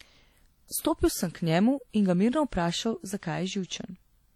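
From start to finish the speech carries plainly audible damage of the kind WMA compression leaves at a low bitrate, likely around 48 kbps. Quantisation noise smears across long transform blocks, so the speech rings and sounds washy, and a hiss rises and falls with the signal.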